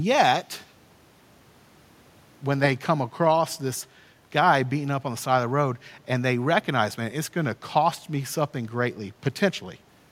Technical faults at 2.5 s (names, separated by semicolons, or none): none